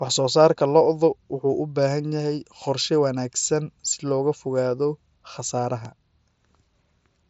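Nothing goes wrong anywhere in this bit of speech, which comes over what sounds like an ordinary wideband Bluetooth headset link, with no dropouts, glitches or other faults to point to.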